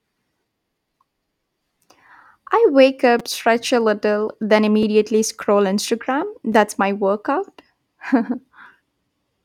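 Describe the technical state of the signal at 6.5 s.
A repeated buffer at 6.52 s, just before "my workout": late audio made the device replay its last 5.33 ms block once, fitting a 256-sample buffer, heard as a brief click.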